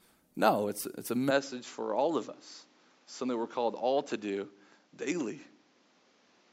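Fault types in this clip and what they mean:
Input switched to a poorer device: the input likely changed after "it's it's a" at 1.31 s, so everything above 7.6 kHz vanishes and faint new background noise appears, without a gap.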